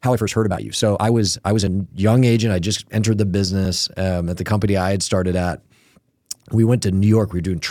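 From the start to 1.9 s the speech runs fast, at roughly 1.56 times normal pace, while the pitch stays where it should be. This is a time-stretched section, likely produced by software compressing the passage to fit a shorter slot by discarding short slices of audio rather than resampling it. The dropped slices leave the delivery sounding rushed, and the pace settles abruptly back to normal once the section ends.

At 1.67 s and again at 3.65 s there is a tiny skip. Each is an overlap between stream segments. The time stamps of adjacent segments claimed the same few milliseconds, and the player trimmed that stretch from audio that was never actually duplicated. A sliver of sound disappears, and the waveform jumps across the gap. The two events sit about 2 seconds apart, which matches a stream divided into 2-second segments, with the first one falling inside the sped-up passage.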